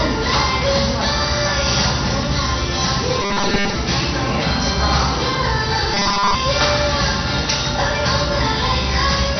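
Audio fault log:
Throughout, MP2 compression: everything sounds dull and smeared, with nothing above about 6.1 kHz and a gurgling, granular texture in what's left. That's likely a heavily starved MPEG Layer II encode, something around 48 kbps. With that few bits, the upper sub-bands get switched off entirely, bands flicker in and out, and the remaining ones are quantised coarsely. That's what gives it the watery, bubbly grain.
3.22 to 3.76 s and 5.94 to 6.35 s, robotic sound from repeated short buffers: in both stretches the sound turns into a rigid, metallic buzz locked at 200 Hz, only loosely tracking what should be there. The likely cause is new audio arriving too late, so playback keeps looping a tiny chunk, about 5 ms, which fits the 200 Hz pitch. Most of the real audio in those windows is skipped over.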